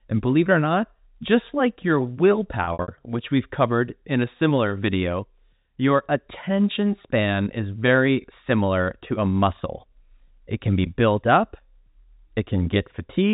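Packet loss with pitch repetition hits from 2.64 to 2.88 s, just before "which we've covered in". About 150 ms of gaps are patched by looping the last pitch period, so it goes briefly buzzy and held.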